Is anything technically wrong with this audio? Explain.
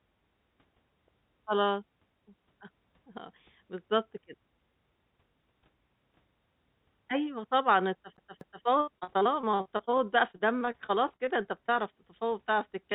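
Yes. The speech has three kinds of technical fault.

At 3.17 s and again at 12.92 s there is a small jump in the sound. This is most likely a dropped buffer (overrun). The software failed to collect its samples before the hardware overwrote them. A very short slice of audio was lost, and the two sides were joined directly. No silence fills the gap. The sound simply skips ahead at that point.

From 8.17 s to 8.65 s the audio behaves like a CD stuck on one turn. A piece about 243 ms long plays, then jumps back and plays again. It repeats twice, with a short mute at each jump. This is the mechanism of a scratched disc throwing the laser back to the same spot. The result is a fast, even stutter.

From 8.81 s to 11.78 s there is repeated packet loss with a robotic sound. Packets went missing 26 times across this span. Each gap was patched by stretching the last sound forward. The longest gap is 65 ms. 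About a fifth of the span is concealed filler. The speech turns choppy, with pieces missing.

The call path cuts everything above 4 kHz, which fits narrowband G.711 A-law at 64 kbps.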